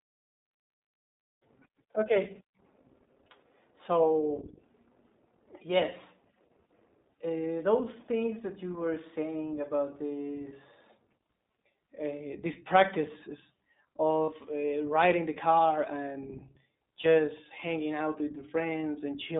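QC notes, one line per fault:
Throughout: iLBC codec. The speech is confined to a telephone band of roughly 200 Hz to 3.7 kHz, and the codec damage is plainly audible as a rough, slightly synthetic edge. The excitation is rebuilt frame by frame with no help from the previous frame, which fits the 20 ms mode at about 15 kbps. On a spectrogram, energy stops sharply near 3.7 kHz and the harmonics look smeared and grainy. The waveform looks ordinary apart from the thin low end.
14.25–14.29 s and 17.02–17.06 s: lost iLBC frames. There are gaps of 40 ms and then 20 ms, which fits two frames and then one frame of 20 ms. The decoder fills each gap by repeating the last pitch cycle mixed with noise, so the sound briefly freezes into a held, faintly buzzy vowel. Normal speech resumes almost at once because each frame decodes on its own. On a spectrogram, each gap shows frozen, evenly spaced harmonic stripes blurred by noise. 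The waveform shows similar repeating periods there.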